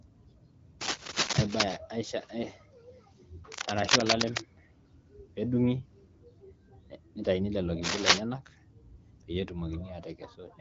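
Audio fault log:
0.81–1.77 s, 3.52–4.41 s, 7.82–8.21 s: cable scratch noise. Three bursts of harsh scratching and rustling ride over the speech, roughly 5 dB above it in the first and about 10 dB above in the later two. The likely cause is a worn cable or connector being moved, so its contact resistance jumps erratically. On a waveform these show as dense, ragged spiky clusters. On a spectrogram they appear as irregular broadband smears up to the band edge near 7.3 kHz.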